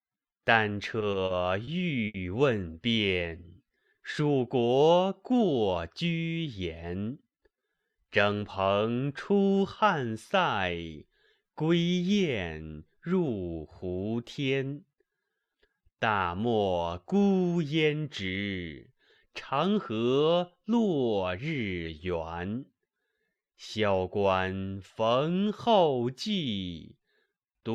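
Packets reached the receiver late and unevenly between 0.99 and 1.70 s, so the jitter buffer ran dry four times and the receiver held over the last sound to fill 80 ms in all, the longest gap 30 ms. The result is repeated stalls (stutter): the audio catches and drags, though nothing is lost. A single late packet then caused a short stall from 2.07 to 2.17 s. The buffer emptied again and 70 ms was stretched from the preceding sound while the delay grew by 70 ms, so one moment hangs too long before the audio picks up where it left off. Later the buffer had built up more audio than it wanted and trimmed it away in small pitch-period pieces, a jitter buffer speed-up. This happens at 16.39 to 16.68 s, running at 113% with around 50 ms cut, at 18.99 to 20.06 s at 105% with around 50 ms cut, and at 21.05 to 21.39 s at 109% with around 40 ms cut. Each passage sounds hurried at unchanged pitch.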